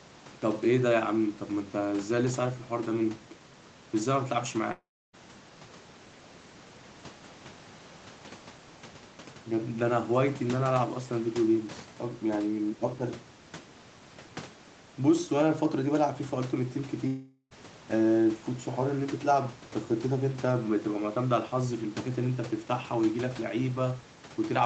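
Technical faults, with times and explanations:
4.71–5.15 s and 17.07–17.53 s, long network dropout: about 0.42 s and 0.44 s of sound go missing. The tail smears into a fading buzz, then silence (about 0.3 s the first time, barely any the second), and the audio resumes with that stretch lost, likely a gap in arriving packets.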